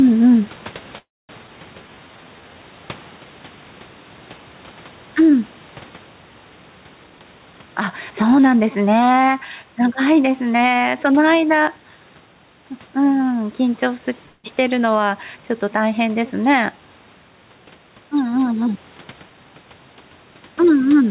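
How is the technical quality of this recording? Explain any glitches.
The recording has clear technical problems. The level pumps throughout, and several call-transport glitches cluster near the start, with more later on. The speech is band-limited, with nothing above 4 kHz, which fits a G.711 mu-law call path at 64 kbps. Faint room noise sits about 34 dB below the speech.

Gain pumping runs through the whole clip. The background rises in the pauses and drops under each loud syllable, with a swing of around 10 dB. The likely cause is gain set far too high at the microphone, with a fast limiter or compressor clamping down on every peak. Loud and quiet passages end up close in level. The speech sounds squashed and breathes audibly between phrases.

Call audio freeze occurs twice. From 0.98 to 1.31 s the last sound is stretched into a fading buzz, and about 230 ms of that is silence. The total hold is 309 ms. 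From 14.26 to 14.46 s a shorter 179 ms freeze fills the gap without going silent. The likely cause is delayed packets draining the jitter buffer. Nothing is lost. The speech simply resumes late, with a pause inserted.

Skip ahead follows at 1.47 to 1.50 s. About 150 ms of speech is missing. Playback jumps forward with only a tiny join between the two sides. This happens when a stretch of audio is dropped while later audio is already queued. Here it claws back some of the delay the first freeze added. The result is an abrupt, clipped transition.

Jitter buffer slow-down runs from 1.82 to 2.55 s. Speech plays at about 81% speed while the pitch stays the same. The receiver repeated single pitch periods and bits of pauses to rebuild its reserve. In total that added 145 ms of audio. Sounds in this stretch are drawn out and slightly sluggish.

Jitter buffer speed-up appears twice. From 7.04 to 8.46 s speech runs at 122% speed, with about 300 ms removed. 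From 18.62 to 19.74 s it runs at 115%, with about 200 ms removed. In both cases the buffer held more audio than its target. The receiver trimmed short pitch-period chunks to cut the delay. Pitch is unchanged, but the speech sounds hurried.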